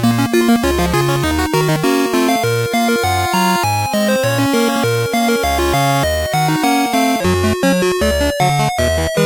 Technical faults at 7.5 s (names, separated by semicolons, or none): section at the wrong speed